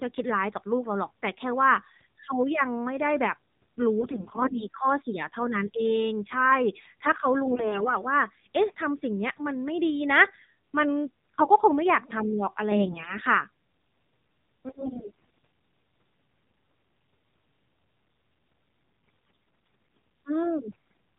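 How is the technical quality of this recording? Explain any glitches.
The quality is poor: the speech has passed through a low-bitrate mobile codec and carries six bursts of corrupted data.

The AMR narrowband mobile codec shapes the whole clip. Nothing above 4 kHz survives, and at this low bitrate the voice sounds buzzy and synthetic. That fits the 7.4 kbps mode, where a handful of pulses per subframe drive a vocal-tract model. A plain low-pass filter would only dull the sound. Here the synthetic texture comes from rebuilding the voice with a model.

AMR bit errors appear at 4.00–4.65 s, 7.44–7.90 s, 12.72–13.16 s, 14.68–15.45 s, 19.96 s and 20.66–20.75 s, with roughly 10 to 15 percent of the weakly protected bits flipped. The frames still passed their checksum, so they were decoded with misplaced excitation pulses and wrong gain and spectrum values. Pitch and loudness hold, but the voice turns hoarse and gargly. 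Lost packets would instead leave muted or smeared gaps.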